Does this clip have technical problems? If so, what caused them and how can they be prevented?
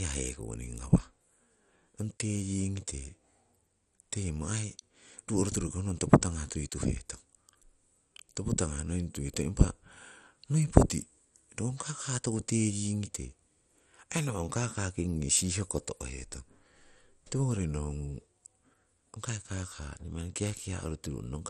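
Yes. Throughout, the speech sounds dull and gurgling, with nothing above 13.2 kHz, likely from heavy MP2 compression at a low bitrate, around 56 kbps. Encode at a higher bitrate or with a modern codec.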